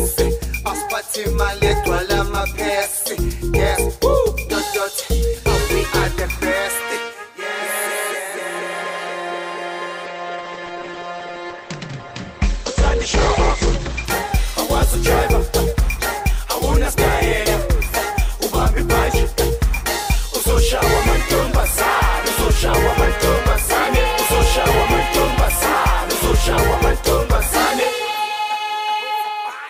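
From 10.07 s to 14.13 s, a call bitrate drop: the encoder was squeezed, consistent with a fall from about 96 kbps to about 13 kbps, so the top end shrinks from 20 kHz to 8 kHz and the audio turns muffled and watery. Unlike a simple filter, the coarse coding adds roughness, with no gaps.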